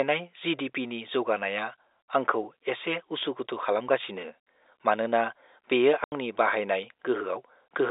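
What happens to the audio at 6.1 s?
Around 6.1 s a run of packets went missing, and the receiver filled the gap with plain silence instead of concealing it. The result is an 80 ms hole from 6.04 to 6.12 s, a length that fits four 20 ms packets. The speech cuts out abruptly and resumes just as abruptly, leaving hard edges against the narrow telephone-band sound of the G.711 line.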